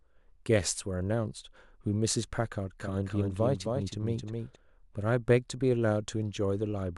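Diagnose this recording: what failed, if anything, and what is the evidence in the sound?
A doubled audio track runs from 2.8 to 4.56 s: a full-band copy roughly 300 ms late, about 5 dB quieter, likely from a second capture path. Spectrograms show duplicated, offset patterns starting and stopping abruptly.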